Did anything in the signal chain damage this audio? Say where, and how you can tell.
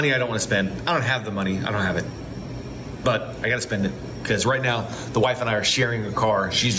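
Yes. Gain pumping runs through the whole clip. The level pumps, with a swing of around 15 dB. The likely cause is input gain set far too high, with a fast limiter clamping each peak.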